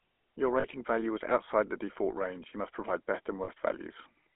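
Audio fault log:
Throughout: GSM full-rate codec. The speech has that buzzy, gravelly edge you get when a vocal-tract model is driven by a sparse pulse train, which fits the 13 kbps full-rate codec. The band sits at roughly 250 Hz to 3.4 kHz, with nothing above.
0.60–0.65 s and 3.44–3.50 s: lost GSM frames. Each gap is about 40 ms, which fits two 20 ms frames. The decoder repeats the last good frame, so you hear a short metallic ring instead of a dropout. The first comes just before "value was" and the second just after "you must provide best".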